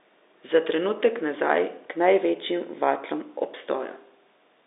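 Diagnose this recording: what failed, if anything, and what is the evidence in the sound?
Nothing failed; the speech comes through an ordinary telephone-band line, and nothing in the sound points to a fault.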